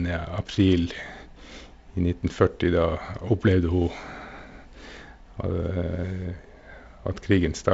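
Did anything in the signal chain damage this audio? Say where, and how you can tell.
No, the speech carries the normal signature of G.722 wideband telephone coding, with content stopping at about 7.7 kHz and only the light coding texture expected from that codec at one of its reduced bitrates.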